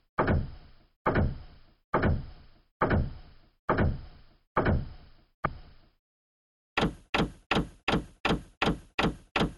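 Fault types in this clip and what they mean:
Stream segment skipped: at 5.46 s the sound jumps abruptly forward, likely because one stream segment failed to load and playback resumed from the next.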